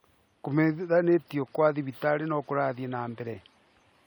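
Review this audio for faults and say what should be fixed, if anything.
No faults turn up in this audio, so nothing needs to be fixed.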